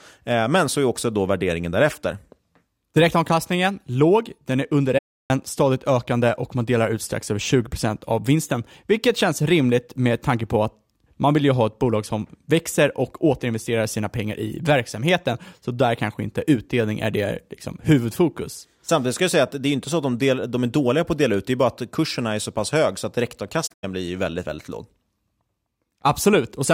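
It's a speech clip with AAC frame loss and muting in two spots. From 4.98 to 5.30 s, between "låg den är under" and "stadigt ökande och man", the sound fades to silence for about 320 ms, which fits roughly fifteen lost frames. Then from 23.66 to 23.85 s, after "pass hög så att" and before "blir väldigt väldigt låg", there's a broken patch of dropouts spread over about 170 ms, with the longest gap around a tenth of a second. In both cases the decoder zeroed the missing frames, and the overlapping windows soften the edges, so you hear soft-edged holes.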